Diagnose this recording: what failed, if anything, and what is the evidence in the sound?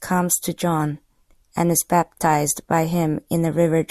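Nothing in the recording points to a failure at any stage of the chain. The speech runs without any audible break, distortion or disturbance that would mark a fault.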